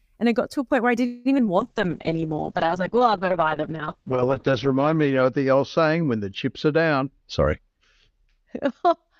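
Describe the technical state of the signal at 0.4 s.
At 0.4 s the speech signal is intact, with no audible fault at that moment.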